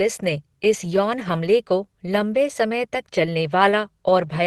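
Nothing stood out on listening to this speech, which comes through a call path with its top end rolled off at about 12 kHz, as expected for that route.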